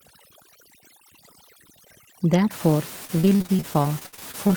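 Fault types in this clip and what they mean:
overdone noise removal: For the first 2.5 seconds the background drops and breaks up into twinkling specks. An over-aggressive noise reducer is pulling individual frequency bands down whenever they approach the room noise level, taking quieter speech detail with them.
repeated packet loss (robotic sound): From 3.05 to 4.53 s the speech goes choppy, broken by a rapid string of short holes up to 64 ms long. Each dropout is patched by stretching the preceding sound, so nearly a third of that stretch is filler.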